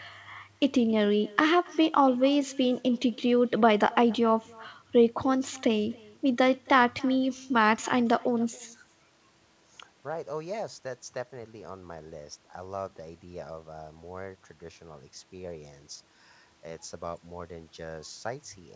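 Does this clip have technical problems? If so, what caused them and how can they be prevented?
Yes. Echo with no canceller runs throughout. The far end's loudspeaker feeds its microphone, so the speech returns about 25 dB quieter, roughly 300 ms late. Enable echo cancellation or use headphones.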